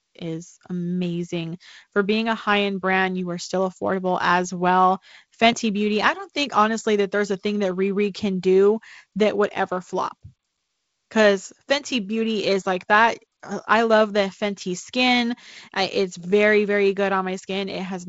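Nothing in this speech clip stands out as a fault; it comes across as ordinary wideband telephone audio, consistent with G.722 coding at 48 kbit/s, with the top end stopping at about 7.7 kHz and only a light codec character.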